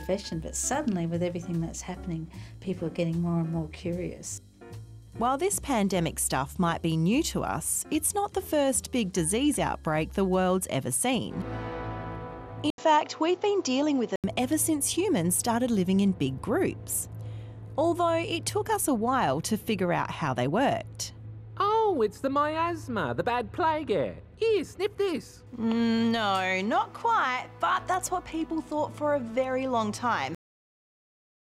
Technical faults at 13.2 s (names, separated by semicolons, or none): input switched to a poorer device